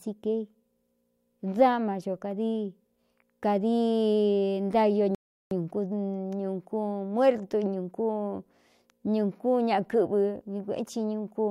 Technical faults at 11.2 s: none

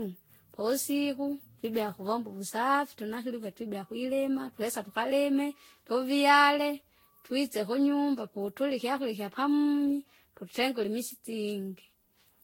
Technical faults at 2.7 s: generation loss

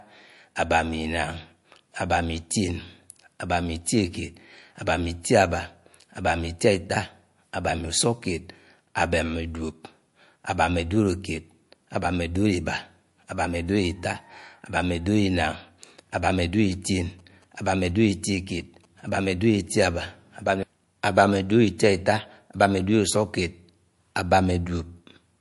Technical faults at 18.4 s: MP3 compression; GSM signalling bursts

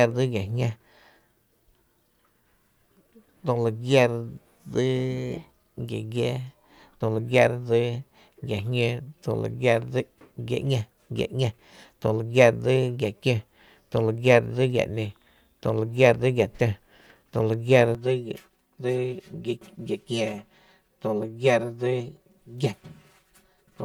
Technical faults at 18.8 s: channel delay (comb filtering)

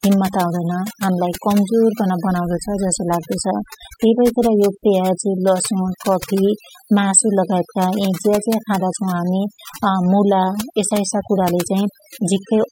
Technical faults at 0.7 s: overdone noise removal

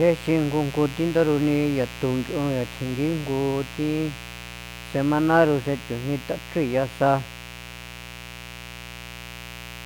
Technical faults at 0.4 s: mains buzz

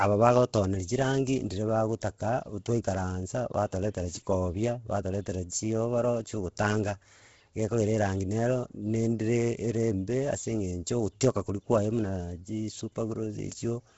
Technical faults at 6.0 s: Bluetooth LC3 compression

